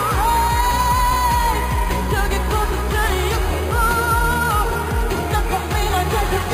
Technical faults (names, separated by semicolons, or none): imaging from sample-and-hold upsampling